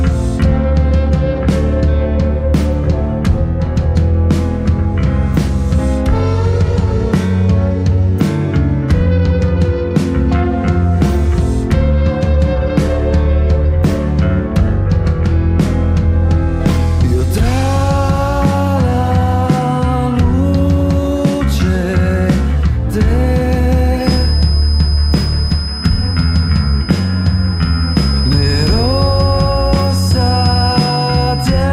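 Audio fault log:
23.95–31.72 s, feedback whistle: a thin, steady 5 kHz tone sits about 15 dB below the sound, swelling and fading slowly. Likely a loudspeaker-to-microphone loop held just short of runaway.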